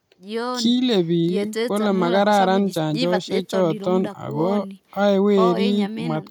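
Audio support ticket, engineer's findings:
No technical faults detected in the speech signal; no dropouts, clipping, glitches or timing errors observed anywhere in the recording.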